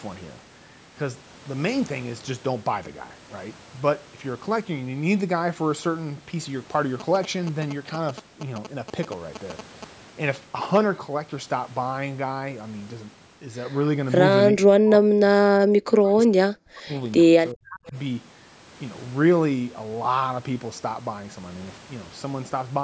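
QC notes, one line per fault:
7.00–9.84 s, GSM signalling bursts: a galloping dit-dit-dit of short 217 Hz buzzes, roughly 10 dB below the speech. A nearby phone's signalling radio bursts were rectified by the audio circuit.
14.51–16.32 s, 16.63–16.93 s, 17.52–17.95 s, speech suppressed in double talk: the speech drops deeply, by up to roughly 40 dB. This is likely the echo canceller turning the speech down along with the loudspeaker echo while both sides talked at once.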